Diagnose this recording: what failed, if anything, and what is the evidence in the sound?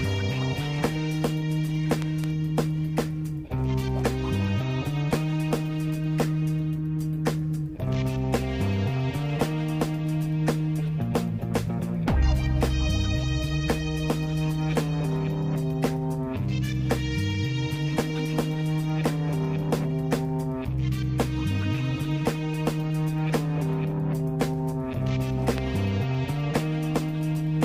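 A voltage step or pulse, likely from a plug, switch or static discharge in the analogue wiring, was added to the signal. The result is a loud pop about 15 dB above the sound: two in quick succession at 2.02–2.26 s, and one at 25.58–25.60 s.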